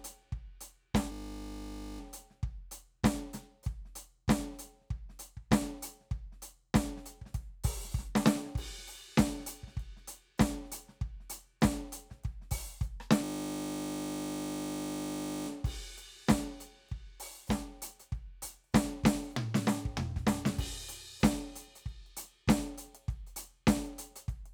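A system hang loop hits the music from 1.12 to 2.0 s and again from 13.24 to 15.48 s. The same 20 ms of buffer repeats exactly, giving a steady 50 Hz buzz rather than the coarse stutter of a longer buffer.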